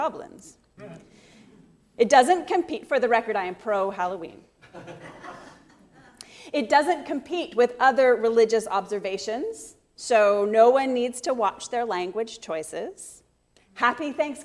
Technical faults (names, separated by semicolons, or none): none